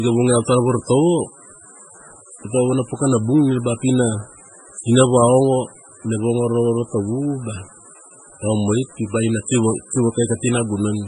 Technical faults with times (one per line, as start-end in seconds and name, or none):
0.00-11.07 MP3 compression